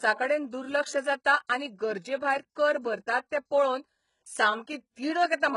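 A speech recording carrying heavy HE-AAC compression damage from start to finish: the sibilants sound gritty and metallic, and the upper register has a synthetic brightness that doesn't quite belong to the voice. That treble is likely rebuilt by spectral band replication, with lower bands copied upward under a coarse envelope, which fits a very low bitrate around 12 kbps. On a spectrogram the top band looks smeared and repeated, with harmonics failing to continue cleanly across the crossover, and everything stops sharply at about 11.1 kHz.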